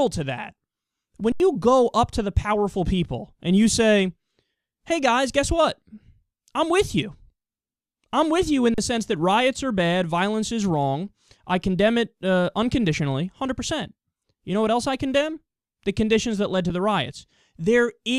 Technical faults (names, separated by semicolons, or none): underrun with held sample